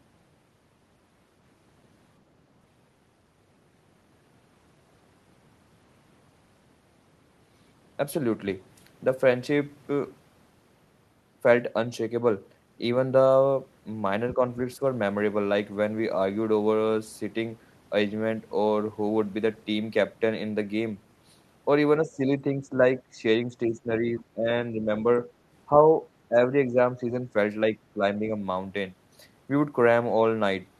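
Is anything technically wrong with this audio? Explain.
Yes. The speech drops in level at 14.35–14.40 s, 22.02–24.89 s, 25.80–25.88 s, 26.28–27.35 s and 27.75–28.32 s. The short events dip by about 5 dB, and the longer stretches dip by up to about 15 dB. This is likely speech suppressed in double talk. With both ends talking at once, the echo canceller could not tell the near voice from loudspeaker echo and attenuated it.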